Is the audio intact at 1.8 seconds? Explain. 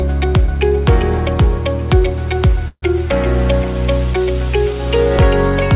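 Yes, at 1.8 seconds the audio is intact, with nothing there beyond the narrowband character of the call path, which leaves nothing above 4 kHz.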